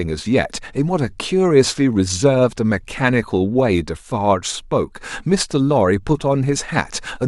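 Nothing technically wrong turns up anywhere in this short speech recording; there's no fault to point to at any moment.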